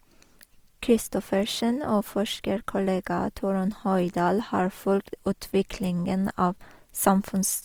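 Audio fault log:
throughout Opus compression: speech sounds grainy and rough, with less swirl than MP3, and its bandwidth stays full. This is likely CELT-mode coding near 24 kbps filling starved bands with noise.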